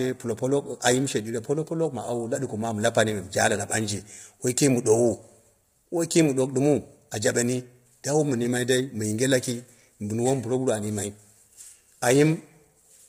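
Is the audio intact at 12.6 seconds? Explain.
No. At 12.6 seconds the speech sounds rough and grainy, the damage running throughout, likely from heavy low-delay AAC compression (AAC-ELD) at a bitrate near 24 kbps. Its short frames blur pitch harmonics, so a spectrogram shows smeared harmonics with noise filling the gaps between them and nothing above 15.6 kHz.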